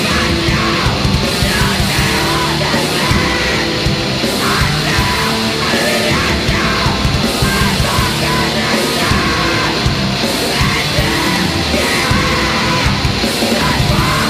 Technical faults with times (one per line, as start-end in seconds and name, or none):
none